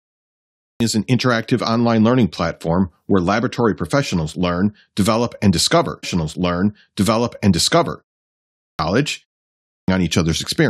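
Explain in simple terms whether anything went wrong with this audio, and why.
Yes, two things went wrong.

First, a clipped start after a pause. The playback device dozed off during short silences and took time to wake up again. At 0.39 s, 8.32 s and 9.47 s, speech begins abruptly, with roughly 0.4 to 0.5 s missing. The first instance comes just before "is an interactive online", and the second comes just after "learn develop and discover".

Second, a stream segment repeated. The player fetched the same chunk of audio twice. Right after "learn develop and discover", from 6.02 s to 8.03 s, about two seconds play over again, with a small blip where it jumps back.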